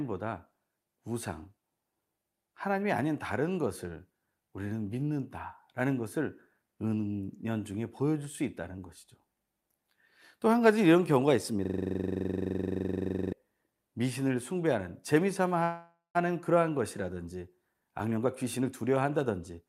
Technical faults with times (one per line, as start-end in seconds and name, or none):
11.65-13.33 system hang loop
15.63-16.17 call audio freeze
17.65-19.66 jitter buffer speed-up